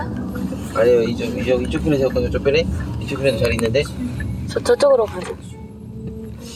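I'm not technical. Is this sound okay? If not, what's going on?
No. Throughout the clip there is gain pumping: the level is pulled down on each loud sound, so loud and soft parts end up closer in level and the sound is squashed. The likely cause is the input gain set far too high, with a fast limiter or compressor pulling it back down.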